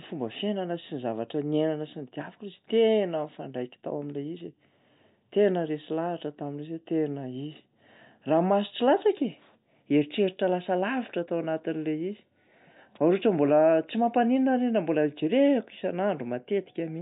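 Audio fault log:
Nothing to log here; no faults turn up anywhere in this speech recording.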